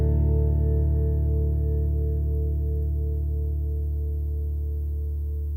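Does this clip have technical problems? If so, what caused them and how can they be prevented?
No, nothing here points to a technical problem, so there's nothing that needs preventing.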